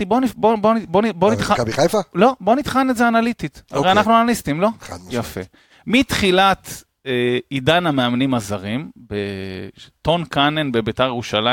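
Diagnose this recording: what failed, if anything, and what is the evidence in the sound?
Nothing failed; no fault can be heard in this speech.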